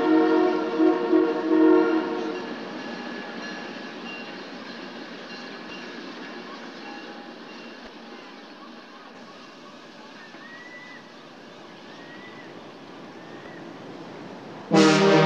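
Four short faults, at 2.38–2.41, 5.67–5.71, 7.84–7.87 and 13.43–13.46 s, each about 30 ms long, point to damaged data in a compressed stream: the decoder misreads corrupted frames and resyncs.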